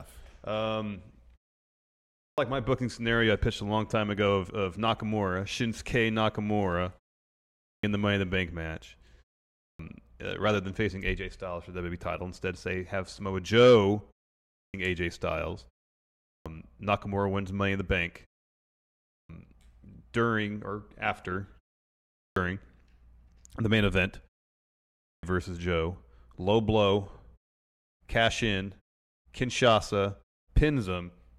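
At 2.08 s (before "my booking scenario I"), 7.49 s (before "in the"), 9.5, 14.42, 16.17, 18.95, 22.04 (after "during or after") and 24.94 s, speech resumes abruptly with its onset missing. This is a clipped start after a pause: the output wakes slowly, swallowing roughly 0.3 s each time. Muted pauses would lose only background; here speech itself disappears.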